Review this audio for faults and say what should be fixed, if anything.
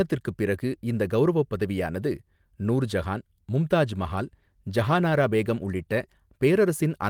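A call bitrate drop runs from 3.97 to 6.17 s, just after "கௌரவப் பதவியானது நூர்ஜஹான் மும்தாஜ்". The speech turns coarser and duller for about 2.1 s, which fits the encoder being pushed from roughly 32 down to 18 kbps when bandwidth estimates fell. To prevent it, provide steadier network capacity or set a higher minimum bitrate floor for the call.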